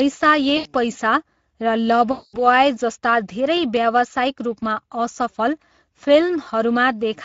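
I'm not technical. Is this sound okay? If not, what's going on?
No, it has two problems. The whole clip runs through the Speex codec, an older internet-call speech format squeezed hard enough here that the voice comes out noticeably rough, hoarse and a bit hissy, like a cheap headset on a game chat.

There's also VoIP packet loss concealed by the speech codec, at 0.57 to 0.73 s and again at 2.11 to 2.42 s. Chunks of the call went missing, so the decoder guessed by stretching the last bit of voice into a buzzy or noisy, fading smear, and it takes a moment to sound right again.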